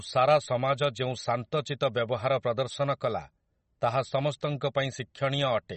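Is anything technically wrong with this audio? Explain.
Yes. Throughout the speech there is plainly audible MP3 compression damage, most likely from encoding at a low bitrate; the damage fits something around 32 kbps. Short of bits, the encoder discards all content above 8.3 kHz and zeroes weak frequency lines that flicker between frames. The result sounds dull, watery and swirly, with chirpy, metallic s sounds and smeared attacks. A spectrogram shows a hard horizontal ceiling at 8.3 kHz and speckled, patchy holes below it.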